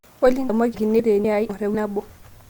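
A chunked recorder likely drops roughly 300 ms at each hand-off, audio missing between chunks, so speech skips abruptly at 0.49, 0.74, 0.99, 1.24, 1.49 and 1.74 s.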